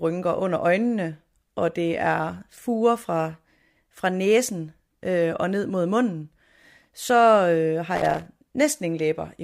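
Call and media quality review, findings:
Loose connector crackle, 7.96 to 8.26 s. Irregular burst of scratching and crackle over the speech, about 0.3 s long. Probable component: worn or dirty cable contact. Contact makes and breaks as it shifts, chopping the signal.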